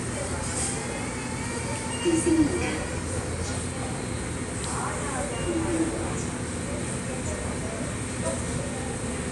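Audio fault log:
Throughout, Dolby Digital compression, likely: dull sound with nothing above 11.5 kHz and rough, fluttering noise around tones from dither-filled lines, which fits a 64 kbps bitrate.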